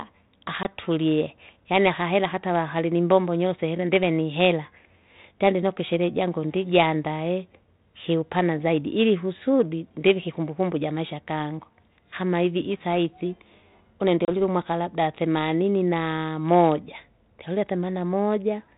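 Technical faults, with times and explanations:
0.63–0.66 s and 14.25–14.29 s, packet loss on an ADPCM call: there are two short, hard-edged dropouts, about 20 ms and 30 ms of sound lost, which points to about two packets and then three. They're filled with silence, so the decoder's predictor and step size drift away from the sender's. That's why the sound comes back slightly distorted, as on "umwaka labda themanini naa", before it settles over the next few tens of milliseconds on this 32 kbit/s G.726 link.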